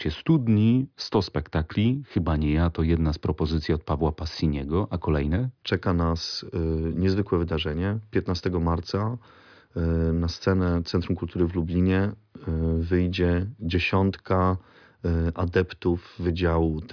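No technical faults are audible anywhere in the speech recording.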